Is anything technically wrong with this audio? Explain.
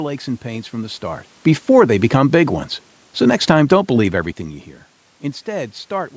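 Yes, there is one fault. From 1.6 to 2.33 s there is automatic gain falling: the automatic gain control judged the incoming level too hot, or its background noise too strong, and pulled its gain down by about 3 dB over that stretch. Because the control acts on the whole signal, the speech and the room noise behind it sink together, a gradual dip rather than a sudden step. This differs from the level shifts near 1 and 4 s, where the talker simply moved relative to the microphone.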